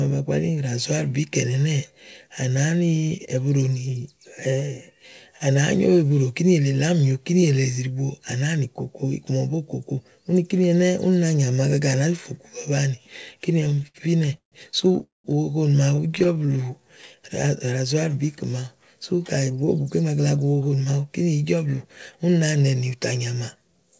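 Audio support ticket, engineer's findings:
Repeated stalls (stutter), 13.61–14.55 s: about a dozen gaps, longest 146 ms, a third of the span filled. Jitter buffer repeatedly underran on late packets; receiver extended and faded last sound. Nothing lost, delivery drags.

Call audio freeze, 15.03–15.27 s: hold of about 211 ms, 170 ms of it silent, then audio resumes where it stopped. Likely packets held in transit, draining the jitter buffer. Gap inserted, nothing missing.

Repeated stalls (stutter), 15.96–16.51 s: eleven brief gaps, none over 14 ms, 23% of span concealed. Same underrun pattern at finer scale.

Jitter buffer slow-down, 16.52–17.67 s: playback at 92% speed, pitch unchanged, about 101 ms added. Buffer rebuilding reserve after the stalls by repeating single pitch periods, stretching sounds.

Jitter buffer speed-up, 19.49–20.93 s: playback at 113%, pitch unchanged, roughly 0.2 s cut. 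Excess buffered audio, probably from late packets arriving together, trimmed by dropping pitch-period pieces. Sounds hurried.

Call path is G.722, with nothing above 8 kHz.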